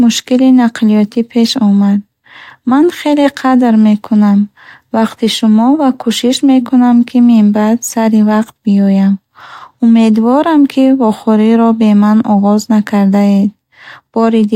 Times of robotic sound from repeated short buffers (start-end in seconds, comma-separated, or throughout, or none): none